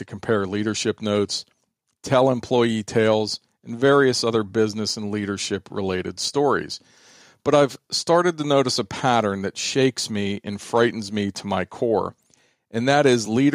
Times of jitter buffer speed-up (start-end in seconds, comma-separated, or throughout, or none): none